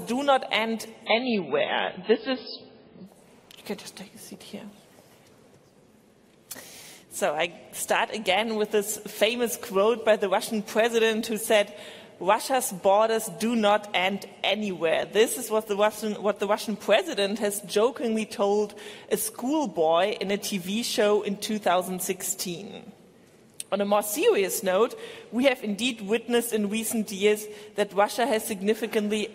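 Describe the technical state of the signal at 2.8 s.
The treble is gone above about 5.3 kHz, with swirly codec artefacts and no gap. From 1.06 to 3.06 s an adaptive stream played at a lower bitrate, consistent with a drop to around 16 kbit/s.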